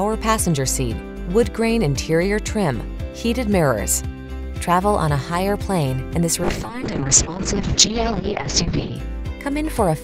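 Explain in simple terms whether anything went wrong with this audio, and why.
From about 6.44 to 9.01 seconds the sound turns rough, watery and muffled, losing its crisp top end. That is a call bitrate drop: the connection suddenly allowed far less data, so the encoder squeezed the audio much harder and cut the highest frequencies.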